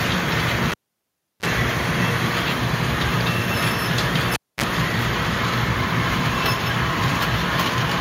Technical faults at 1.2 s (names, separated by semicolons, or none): cable pulled and plugged in